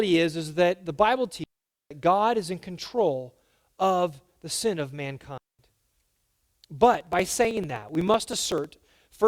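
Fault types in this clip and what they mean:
digital wireless dropout: the receiver loses too much of the radio data stream and mutes itself, leaving clean holes of near silence from 1.44 to 1.91 s (about 470 ms) and 5.38 to 5.59 s (about 210 ms). Unlike a hiss or crackle dropout, no noise burst surrounds either gap.
periodic USB or driver dropouts: something repeatedly stalls the bus or audio driver, so around a millisecond of audio is skipped outright every 63 ms from 6.94 to 9.21 s, roughly forty losses in all. They sound as an evenly spaced ticking over the speech, not as long silent holes.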